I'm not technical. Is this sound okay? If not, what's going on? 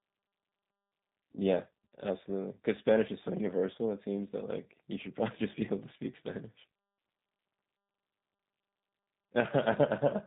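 No. The speech went through the G.729 codec, a low-data phone-call format that rebuilds the voice from a rough model instead of sending it directly. For the whole clip, nothing above 3.8 kHz survives, so the voice sounds muffled, slightly rough and synthetic.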